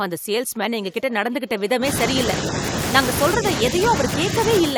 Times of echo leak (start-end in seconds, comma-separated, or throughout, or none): 0.83-1.61